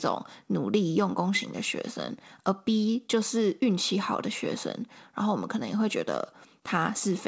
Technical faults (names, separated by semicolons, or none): none